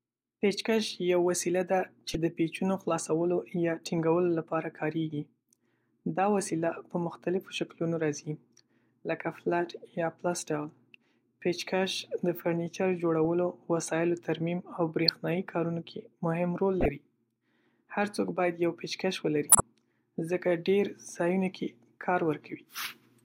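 Speech with five corrupt frame decoded events, at 2.09–2.15, 3.98–4.00, 15.08–15.14, 16.81–16.88 and 19.49–19.60 s. Damaged compressed frames were decoded anyway, throwing misplaced spectral energy out as brief chirps and blips. The one near 4.0 s is faint, and those near 15.1 and 19.5 s are loudest.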